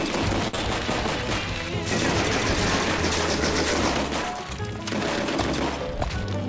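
At 0.48 s a short stall from a late packet begins and lasts until 0.55 s. The packet arrived late and the jitter buffer ran dry. The receiver held the last sound for about 55 ms, then resumed from the same point. Nothing is lost, but the sound drags briefly, with a faint buzz or dip.

Right after, from 0.55 to 0.61 s, comes a short concealed packet loss. About 40 ms never reached the decoder. The receiver extended the preceding sound to cover the gap, then blended back. It is heard as a quick smear or wobble, with a sliver of sound gone, over a call path that carries nothing above 8 kHz.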